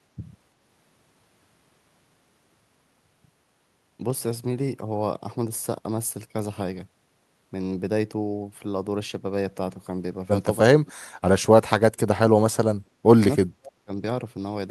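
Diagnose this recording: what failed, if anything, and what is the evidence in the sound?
Speech suppressed in double talk at 10.81 to 11.03 s and 11.63 to 13.92 s: the speech sinks by up to about 40 dB and nearly vanishes for about two seconds in the second stretch. The call-processing echo canceller likely mistook simultaneous talk for echo and attenuated both.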